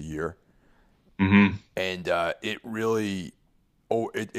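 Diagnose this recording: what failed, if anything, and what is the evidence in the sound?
Nothing failed; no stage shows any audible fault.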